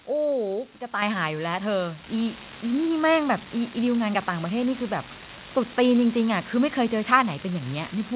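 A steady crackle, like fine fizz or grit, runs through the whole speech clip and carries on in the pauses between phrases. That points to an unreliable data bit: one data line in the converter or interface is marginal, so its bit comes out wrong in a random share of samples. Each wrong bit adds a spike of the same size, and because the errors do not depend on the signal, the crackle stays even when the speech stops.

At 1.02 s, speech and background noise suddenly get louder together, by about 7 dB. At 2.04 s they jump again, by about 4 dB. This is the microphone volume stepped up: the call software judged the input too quiet and raised the device's input volume in single steps rather than gradually. Because the change happens at the device, everything in the signal gets louder together, which is why the background jumps along with the speech.

The call path itself lets nothing through above 4 kHz, which fits a narrowband G.711 mu-law connection at 64 kbps.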